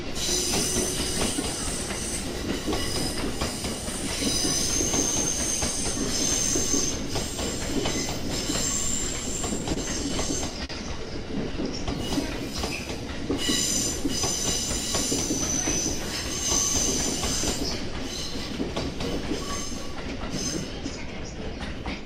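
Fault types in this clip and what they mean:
Repeated stalls (stutter): Between 9.59 and 10.71 s the receiver kept running dry and had to stretch the last bit of sound to cover six short gaps. The longest was 45 ms and they add up to about 97 ms. Nothing's actually lost, but it drags and hiccups.
Jitter buffer slow-down: From 11.52 to 13.02 s the buffer was building up a reserve by repeating tiny pitch-period-sized slices over and over. That adds 107 ms, so the sound plays at about 93% speed with unchanged pitch and a slightly drawn-out feel.
Jitter buffer speed-up: Around 17.58 to 18.84 s the buffer was holding too much, so the receiver trimmed out short pitch-period chunks, roughly a tenth of a second in all. The sound runs at about 106% speed with the pitch intact and comes across a bit rushed.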